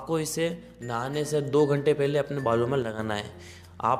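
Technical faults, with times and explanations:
2.82–2.99 s, one channel drops out: for about 0.16 s the sound falls abruptly by about 6 dB, then snaps back, never reaching silence. The likely cause is a lost stereo channel in the mono sum. A gain dip would ramp rather than step.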